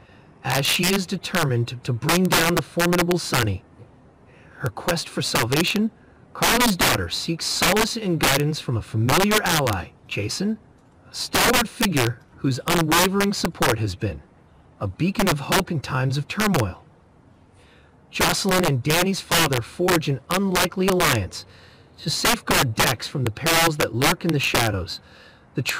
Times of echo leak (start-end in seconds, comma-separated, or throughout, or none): none